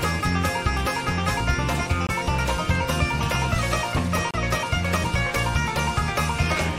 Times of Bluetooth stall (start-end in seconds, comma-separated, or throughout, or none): 2.07-2.11, 4.31-4.35